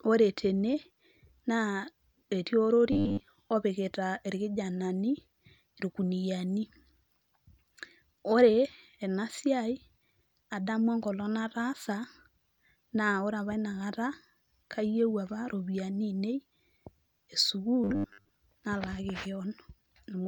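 Speech, with two stretches of robotic sound from repeated short buffers. The first runs from 2.92 to 3.27 s, just before "opikita irkijanani". The second runs from 17.84 to 18.29 s. In both, the sound becomes a rigid, metallic buzz at 100 Hz that still loosely tracks the speech. The likely cause is audio arriving too seldom, so playback loops a short slice, which fits a 10 ms buffer, and skips most of the real signal.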